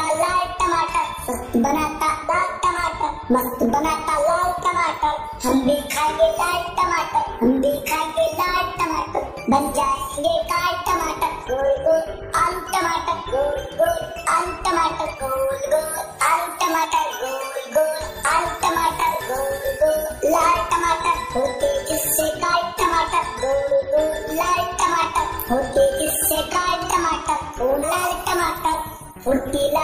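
At 2.28 s, 16.84 to 16.86 s, 22.53 s and 27.82 to 27.84 s there are brief blips of about 20 ms or less. These come from damaged data in a compressed stream: corrupted bytes make the decoder misread those frames and lose sync until it finds a valid frame header.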